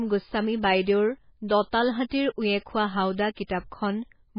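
The speech has most likely been through heavy MP3 compression at a very low bitrate, around 16 kbps by the sound of it. Starved of bits, the encoder has removed everything above 5 kHz, so the treble is gone for the whole clip and the speech sounds dull and muffled. Weak frequency components flicker in and out from frame to frame, giving a watery, swirling texture, and sharp onsets come out smeared rather than crisp.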